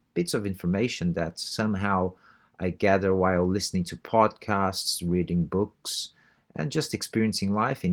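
No technical faults can be heard in this speech clip. The Opus voice compression runs in its hybrid mode at 20 kbps and keeps the full band, with nothing above about 20.2 kHz.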